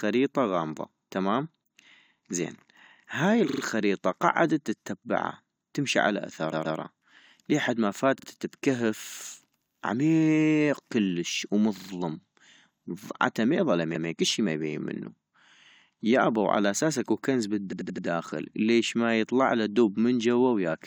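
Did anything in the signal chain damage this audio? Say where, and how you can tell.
Yes. Repeated frames from the codec or storage stage cause stutters at 3.49, 6.52, 8.18, 11.76 and 17.72 s. Identical 43–128 ms blocks replay, lengthening the audio, whereas dropouts leave a gap.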